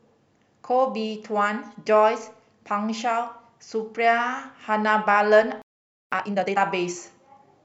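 A speech recording with two connected playback faults near the end. At 5.62 s the speech cuts off mid-flow and the output goes completely silent for about 0.50 s, until 6.12 s. This is a playback stall, most likely caused by the player's buffer running dry or its output thread being held up so that no samples reached the device. When sound returns at 6.12 s, time-compressed catch-up follows immediately. For the next 0.48 s, to 6.60 s, the speech runs at twice its normal rate while its pitch stays unchanged. The player is clearing the backlog that built up during the gap by removing short segments and cross-fading across the joins. Those splices give the passage a hurried delivery.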